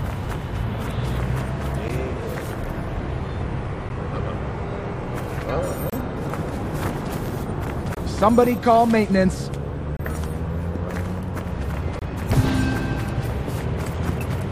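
Gaps between stream segments cut hard-edged silences at 1.88, 3.89, 5.90–5.93, 7.95–7.97, 9.97–10.00 and 11.99–12.02 s, every two seconds, where segment timestamps fail to meet.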